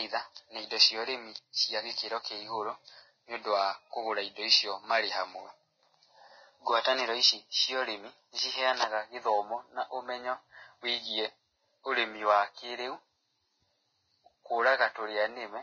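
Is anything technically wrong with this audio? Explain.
Yes. Throughout the speech, the audio carries heavy lossy-codec damage, most likely Vorbis compression at a low rate, which fits a bitrate near 18 kbps. The encoder has dropped everything above 6.5 kHz and quantised the remaining treble so coarsely that its fine structure turns into grainy, hiss-like noise. Consonants sound smeared and the voice has a rough, fizzy edge. A spectrogram shows a hard ceiling at 6.5 kHz and speckled, blotchy upper bands.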